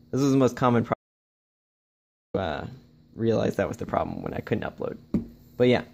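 The audio has an audio dropout to silence from 0.94 s to 2.34 s. The sound cuts off abruptly and returns mid-flow about 1.4 s later. The gap holds no room tone at all. The input was likely lost while recording continued, and what happened in that span is missing.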